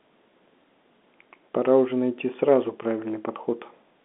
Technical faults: none

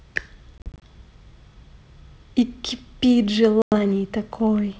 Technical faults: packet loss on an ADPCM call

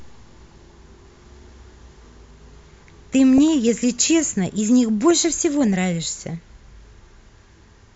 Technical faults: DAB burbling

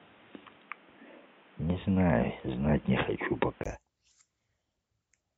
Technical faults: input switched to a poorer device

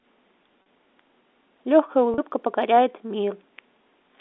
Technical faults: packet loss with pitch repetition

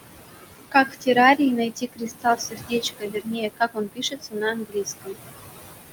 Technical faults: noise suppressor artifacts; speech cut by the noise suppressor

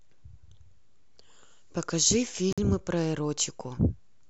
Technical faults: Bluetooth stall

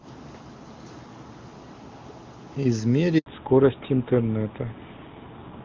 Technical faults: handover gap; fallback to narrowband

